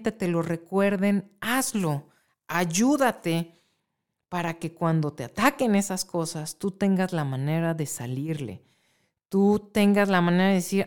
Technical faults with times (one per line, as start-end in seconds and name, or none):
1.80-3.80 pre-emphasis left on